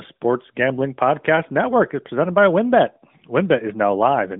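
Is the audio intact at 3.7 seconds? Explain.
Yes, the audio is intact at 3.7 seconds, with no fault at that moment.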